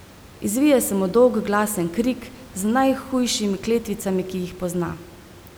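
No technical faults can be heard anywhere in the speech. A steady room noise sits about 23 dB below the speech, which belongs to the recording space rather than the system.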